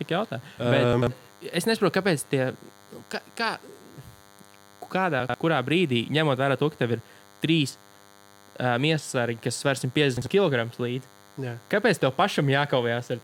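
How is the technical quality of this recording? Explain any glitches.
The recording has two problems: a constant DECT cordless phone buzz and three places where chunks play out of order.

A nearby DECT handset or base sends radio bursts 100 times a second, and the audio circuitry rectifies them into the signal. The result is a thin, steady 100 Hz buzz rich in harmonics, sitting roughly 30 dB below the speech for the whole clip.

At 0.93 to 1.07 s, 5.20 to 5.34 s and 10.17 to 10.26 s, blocks of about 46 ms were delivered or written late. They play two blocks behind their proper place, or one block behind at 10.17 s. No audio is lost, but the speech briefly jumbles.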